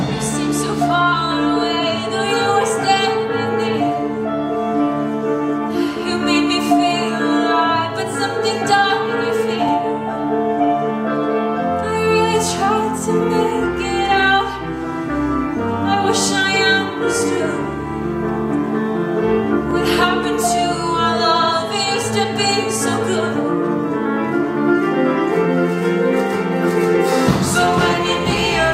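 The audio has overlapping chunks. A brief stutter occurs at 9.69–9.71 s and again at 19.71–19.73 s. Each join replays about 21 ms of sound. The audio was handled in 10-second chunks, and each chunk began before the previous one ended.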